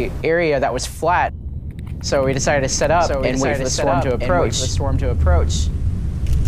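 A second copy of the audio is mixed in, likely from a slower capture path or an edit holding two copies out of step, giving a doubled audio track from 2.84 to 5.74 s: a full-band repeat about a second behind, around 5 dB quieter, with no decay or room colour, starting and stopping abruptly.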